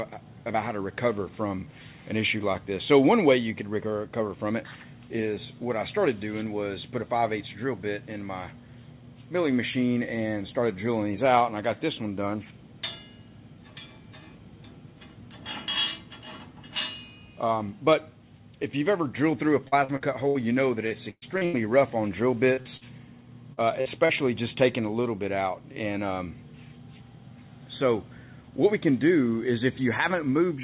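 Audio carried over a WebRTC call path, with nothing above 4 kHz, which fits G.711 mu-law at 64 kbps. From 19.68 to 20.38 s and again from 20.87 to 21.56 s, repeated packet loss gives a choppy, robotic sound. Each stretch holds four gaps, the longest 70 ms and 112 ms, and the receiver patches them by extending the preceding audio, covering about 27% and 38% of each span. Short concealed packet loss follows, with roughly 40 ms holes at 22.53, 22.61, 22.77, 23.53, 23.81 and 24.05 s. Each hole is filled from the preceding signal and blended back, heard as a brief smear or wobble where a short sound can drop out.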